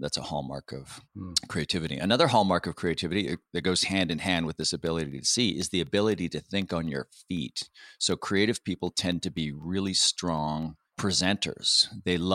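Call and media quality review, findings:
Periodic USB or driver dropouts, 1.87–12.13 s: ticks every 0.25 s over speech. USB bus or driver stall blanks sub-millisecond slices to silence, about forty times.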